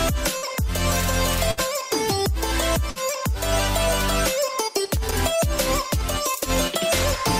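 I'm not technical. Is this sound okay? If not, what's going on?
No. At 0.37, 1.51 and 2.90 s there is a burst of packet loss: about 60 ms vanishes, briefly smoothed over by a held, fading sound, then the audio jumps ahead. From 4.85 to 5.12 s, loose connector crackle adds rough, irregular scratching rather than a smooth hold, the way a wobbly plug sounds.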